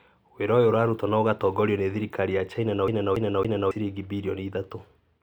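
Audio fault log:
2.88–3.71 s, CD stuck on one turn: the speech locks onto a slice of about 0.28 s and plays it three times in quick succession, each repeat set off by a brief mute where the playback jumps back. The even, mechanical stutter comes from the pickup being thrown back to the same point on each rotation, as a surface scratch would do, so the identical fragment returns at a fixed interval until tracking recovers and the speech carries on.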